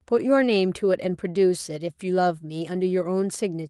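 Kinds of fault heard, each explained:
No audible technical faults in this recording.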